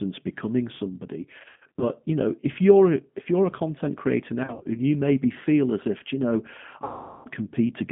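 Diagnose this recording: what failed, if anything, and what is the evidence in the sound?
Codec stage: the G.729 codec at 8 kbit/s makes the speech rough and synthetic. On a spectrogram the energy sits in a 150 Hz to 3.5 kHz band with nothing above it.

Network stage: VoIP packet loss concealed by the speech codec at 1.39–1.85 s after "becoming somebody", 4.44–4.80 s after "you're a content creator", and 6.84–7.28 s after "as if you know". The decoder extrapolates its last frames into buzzy tones or coloured noise that fade. On a spectrogram these appear as smeared, flat harmonics, and the waveform shows a sagging envelope.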